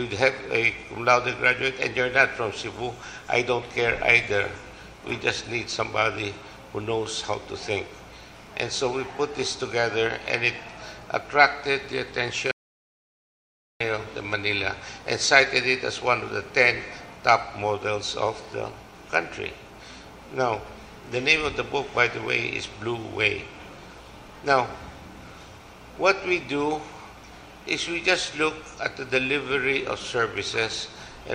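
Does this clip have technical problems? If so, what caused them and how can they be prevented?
Yes. The input likely dropped while recording continued, leaving an audio dropout to silence from 12.51 to 13.80 s: 1.29 s of dead silence with no room tone. Secure cables and connections, guard mute controls, and monitor input levels live so a lost signal is caught immediately.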